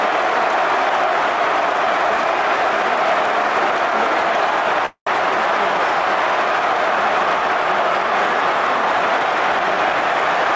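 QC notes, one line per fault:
4.86–5.09 s, call audio freeze: the last sound carries on as a fading fill, 206 ms in all, that ends in 100 ms of silence. The audio then resumes exactly where it stopped, with nothing lost. Packets likely arrived late and let the jitter buffer run empty, inserting a gap.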